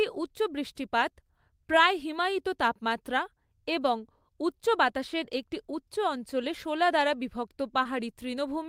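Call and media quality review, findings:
Short concealed packet loss, 7.83–7.87 s: brief smear in the speech. Probable component: receive path, decoder packet-loss concealment. About 20 ms of audio arrived late or never arrived. The decoder synthesised 15 ms from the preceding sound, then blended back into the received signal.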